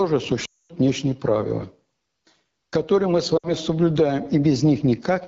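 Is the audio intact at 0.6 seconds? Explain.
No. Lost AMR speech frames cover 0.45 to 0.71 s, a run of about 240 ms. Those frames failed their radio checksum, so the decoder kept rebuilding sound from the last good pitch and vocal tract settings while lowering the gain. At 0.6 s the sound has dropped to near silence, as wideband decoding does within two frames. It returns thin and rough just before "внешние правила".

AMR wideband (HD Voice) codec damage is also present at 0.6 s and throughout. AMR-WB models speech below 6.4 kHz as pulses driving a vocal tract filter and fills the band from 6.4 to 7 kHz with shaped noise. Here the coding is plainly rough and raspy, which fits one of the lowest modes, around 8.85 kbit/s. At a rate that low the model cannot follow the fine detail of the speech.

Gain pumping runs through the same moment. The gain swings by about 10 dB, pulling down whenever a loud sound arrives, so levels sit squashed close together. 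The likely cause is a mic gain set far too high, with a fast limiter or compressor pulling the level down on every peak.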